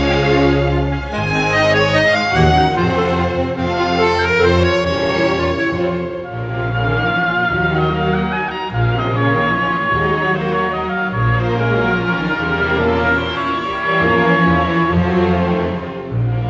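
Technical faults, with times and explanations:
No technical faults can be heard at any point in this clip. There is nothing to list with a time or range.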